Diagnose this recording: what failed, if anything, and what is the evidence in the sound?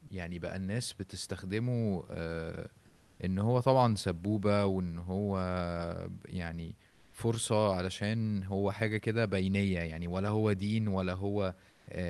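Call processing stage: at 0.07 to 0.09 s, 20 ms of sound gives way to steady noise, the sound dropped by the voice detector. A noise fill rather than a hard gap rules out a dropout. Likely Opus DTX misjudging the sound as background.

Codec stage: comfort noise in place of the background at 2.87 to 3.19 s, 6.87 to 7.13 s and 11.71 to 11.87 s. The textured room noise, about 36 dB below the loud parts, turns featureless at nearly the same level. Likely Opus DTX synthesis, not loss concealment, which would smear the preceding sound.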